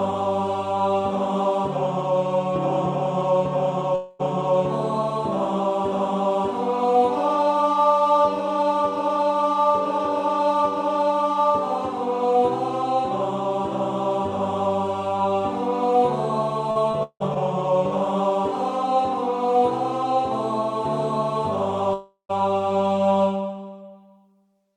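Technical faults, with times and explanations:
3.95–4.21 s: long network dropout, likely. About 240 ms of sound is missing, bridged by a fading continuation of the last sound; no silence follows.
16.71–17.37 s: repeated packet loss (robotic sound). Four gaps, the longest 170 ms, are patched with extended sound. About 37% of this stretch is filled, giving choppy, robotic audio.
21.93–22.31 s: long network dropout, likely. About 360 ms never arrives. A fading continuation covers it, then roughly 120 ms of silence before the audio resumes.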